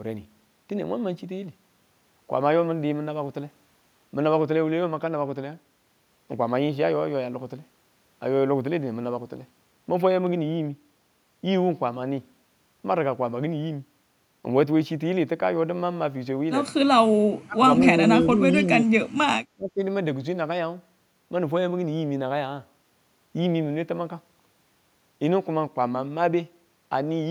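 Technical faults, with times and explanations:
17.45 to 19.82 s, speech suppressed in double talk: the speech ducks sharply three times, at 17.45 to 17.64 s, 18.2 to 18.89 s and 19.55 to 19.82 s. The first and last dips are brief, roughly a fifth of a second, and deep, about 30 dB and about 25 dB down. The middle one lasts about half a second and sinks only about 15 dB. The likely cause is an echo canceller that mistook this talker for returning loudspeaker echo while both ends spoke at once and turned the level down.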